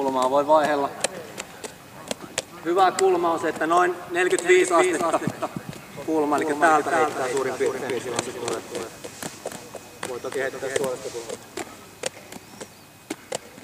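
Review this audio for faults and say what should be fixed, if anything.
A doubled audio track runs from 4.38 to 10.82 s: a second full-band copy trails the sound by around 300 ms at roughly 5 dB lower, with no decay or room colour, and cuts in and out abruptly. It is likely a second, slower capture path mixed in alongside the main one. Prevent it by making sure each source reaches the mix through only one route.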